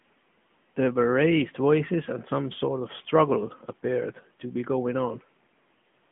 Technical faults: AMR narrowband mobile codec

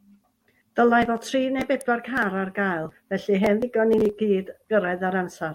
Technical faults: electrical switching spike

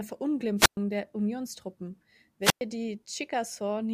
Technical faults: wireless microphone squelch dropout

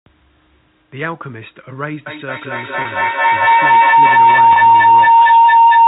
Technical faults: feedback howl; packet loss with pitch repetition

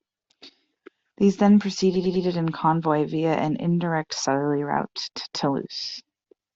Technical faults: repeated frames

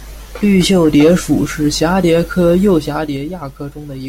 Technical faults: zipper noise

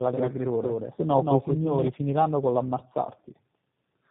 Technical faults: tandem speech coding; doubled audio track

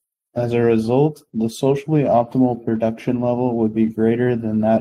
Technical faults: clock drift between sender and receiver; repeated timing corrections

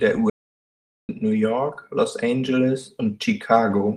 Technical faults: audio dropout to silence

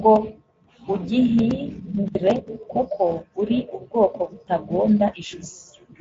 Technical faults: Speex codec

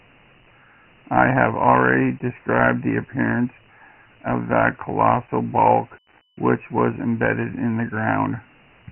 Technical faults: Dialogic VOX ADPCM

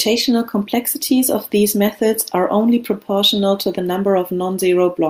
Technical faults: none

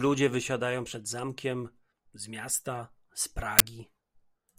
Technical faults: uninitialised buffer

